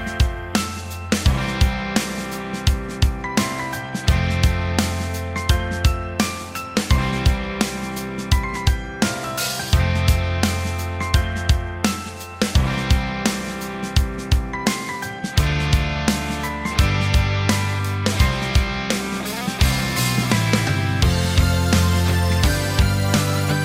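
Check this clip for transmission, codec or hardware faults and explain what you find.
Checking this clip turns up no faults to explain.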